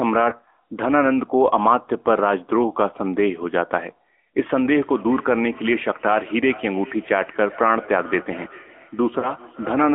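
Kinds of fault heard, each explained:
AMR narrowband mobile codec: The speech is squeezed into a band of roughly 250 Hz to 3.4 kHz and rebuilt from a vocal-tract model at 10.2 kbps, leaving a plainly buzzy, synthetic edge that simple telephone band-limiting alone would not add.
Lost AMR speech frames: Twice, at 0.30 to 0.36 s and 9.20 to 9.33 s, a single 20 ms frame goes missing and the decoder fills it by reusing the previous settings at falling gain. This gives a brief dip or warble rather than a clean silent gap.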